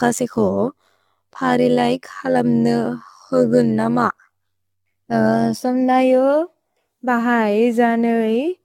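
Right from the start, the speech has a swirly, hollow, smeared quality that's worse than a single pass at a decent bitrate would give you, and nothing comes through above 17 kHz. That's generation loss, likely from the audio being decoded and re-encoded around seven times, in a way that fits AAC-LC at 96 kbit/s. Each pass re-quantises on a shifted frame grid, so the noise and spectral holes stack up and the consonant attacks go soft. It stays like that for the whole clip.

Stacked on top of that, from 0.0 s to about 5.6 s, there's a rough, buzzy, robotic flutter. That's overlap-add ripple. The audio was split into windowed frames and put back together with an overlap that doesn't sum to a flat gain, so the level pumps up and down by about 11 dB once per frame, at something like 100 Hz. That's fast enough to come across as a gritty tremolo rather than a slow wobble. After about 5.6 s the flutter stops, but the codec smear carries on.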